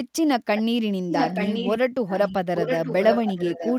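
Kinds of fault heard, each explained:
Echo leak: a delayed copy of the speech, about 880 ms late, returns in four scraps from 0.57 s to the end, likely from loudspeaker pickup that the echo canceller missed.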